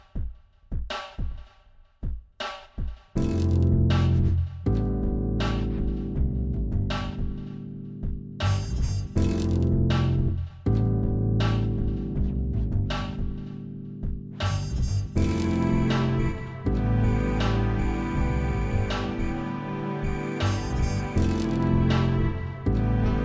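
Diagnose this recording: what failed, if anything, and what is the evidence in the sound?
Nothing in the recording points to a failure at any stage of the chain. The sounds come through with no dropout, distortion, glitch or other artefact that would mark a broken link between capture and playback.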